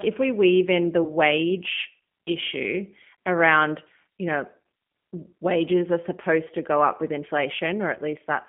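G.729 codec damage runs throughout: the 8 kbit/s coder rebuilds the speech from a filter and sparse pulses in a 150 Hz to 3.5 kHz band, sounding plainly rough and synthetic. VoIP packet loss concealed by the speech codec occurs at 1.04 to 1.12 s, just after "we weave in the", and at 7.95 to 7.99 s. About 20 ms and 10 ms of audio went missing, and the decoder stretched its last pitch and filter into a brief fading buzz or coloured noise.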